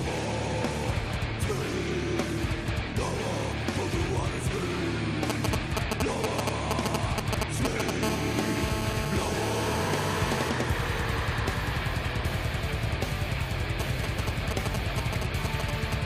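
A nearby 2G phone's signalling transmissions were rectified by the audio circuit, causing GSM signalling bursts: galloping groups of short 217 Hz buzzes from 5.30 to 7.90 s at roughly the audio's level, and from 13.80 to 15.94 s slightly quieter. During a call, its steady 217 Hz transmission bursts produce GSM phone buzz, a hard, raspy, harmonic-rich tone about 6 dB below the audio, from 8.03 to 10.49 s.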